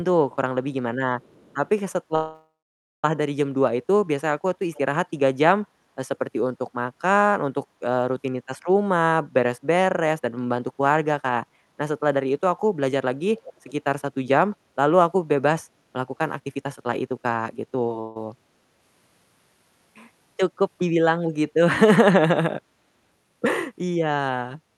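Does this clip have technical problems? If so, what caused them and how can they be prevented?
Yes. A faint, delayed second copy of the speech drifts in at 0.31 to 0.36 s, 1.21 to 1.69 s, 4.73 to 4.79 s and 13.38 to 13.72 s, trailing the original by about 0.44 s. It is very quiet at first, roughly 35 dB under the speech, and grows to roughly 20 dB under by the last instance. This echo leak likely comes from a far end on loudspeaker whose echo canceller let part of the returned sound through. Using a headset, or a well-tuned acoustic echo canceller, prevents it.

At 2.15 to 3.05 s the sound stalls and stretches into a fading fill, then goes quiet for about 0.55 s before resuming exactly where it stopped. A shorter stall at 18.00 to 18.17 s fills about 0.15 s with no silence. In both, nothing is lost, only delayed. This is a call audio freeze, likely caused by packets arriving late so the jitter buffer ran dry and the receiver padded the wait. 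A steadier network path, or a deeper jitter buffer, prevents it.

From 9.91 to 12.92 s the speech sounds slightly hurried at unchanged pitch, running at about 110% speed. From 16.40 to 17.93 s it is noticeably rushed, at about 128%. This is jitter buffer speed-up: after delayed packets arrived in a bunch, the receiver trimmed many tiny pitch-period slices to shed excess delay, roughly 0.3 s and 0.4 s respectively. Smoothing packet delivery, or letting the buffer drain more gradually, prevents it.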